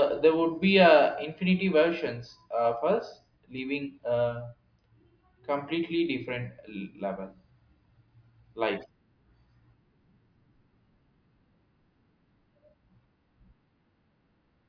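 Nothing goes wrong anywhere in this recording of speech; there's no technical fault to point to at any moment.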